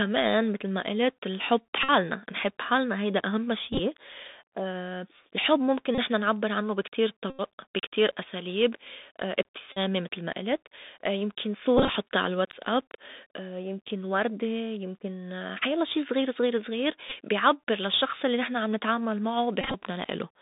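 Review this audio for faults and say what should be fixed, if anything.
The whole clip is muffled and narrow, with nothing below about 150 Hz or above 3.7 kHz. Sibilants sound scratchy, loud bright moments break up, and a grainy hiss sits under the speech. This is the Bluetooth CVSD headset codec. Each sample is coded as a single up-or-down step whose size adapts, which fits a 64 kbit/s stream. When the signal moves faster than the step can follow, the result is slope distortion and granular noise. To prevent it, record over a wideband link (mSBC or LC3) or a wired microphone instead of the headset voice profile.

Short buzzy patches break the speech at 1.83–1.91 s, 3.72–3.80 s (just after "نحب حالنا هيدا أهمّا"), 5.95–5.98 s, 7.30–7.41 s, 9.72–9.78 s (just before "متل ما قلت"), 11.77–11.89 s, 17.10–17.13 s and 19.61–19.75 s (just after "الّي نحن عم نتعامل"). These are Bluetooth headset packet repeats. 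Voice packets were lost and the previous packet was decoded again every 3.75 ms, producing a tone near 267 Hz. The longest loss, about 86 ms at 7.3 s, gives the steadiest buzz. At 3.7, 11.8 and 19.6 s the losses are scattered, with runs of about 20 ms, so the buzz comes in brief fragments. To prevent it, keep the headset close to the phone and away from Wi-Fi or USB 3 interference so the radio link holds.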